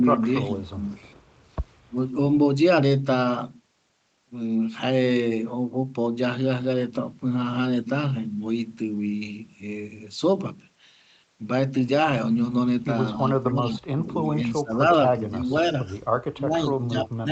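From 0.0 to 0.2 s the speech dips by roughly 10 dB in brief patches. This is speech suppressed in double talk, likely caused by the echo canceller turning down the near talker while the far side was also speaking. The same pumping returns at 1.88 to 1.96 s, deeper at around 20 dB. Between 0.12 and 0.17 s, and again from 0.63 to 1.45 s, a faint copy of the speech trails 242 ms behind, sitting far below the direct sound and quieter in the second stretch. This is echo leak, likely residual loudspeaker pickup that the far end's canceller did not remove. From 13.43 to 14.78 s the suppression is heaviest, with the speech turned down for about a second in total and dropping by as much as roughly 35 dB. Lighter dips follow at 15.15 to 15.54 s, and from 16.1 s to the end the speech dips by as much as around 20 dB.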